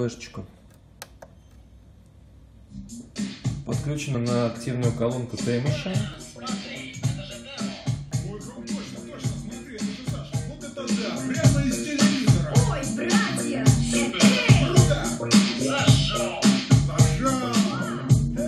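Short clicks or tiny skips land at 4.15, 6.14, 8.12, 10.10 and 14.10 s, all spaced on a 2-second segment grid. That's overlap between stream segments: neighbouring chunks claimed overlapping time stamps, so the player trimmed a few milliseconds of real sound, leaving a small waveform jump.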